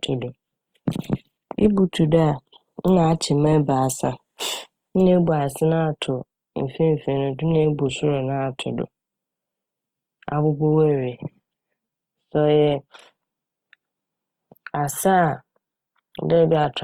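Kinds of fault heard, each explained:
Opus compression: Plainly audible grainy roughness runs through the speech, likely from Opus CELT coding, fitting a rate near 24 kbps. Bands are filled, not emptied, so there is less swirling than with MP3, and bandwidth stays full to about 20.2 kHz.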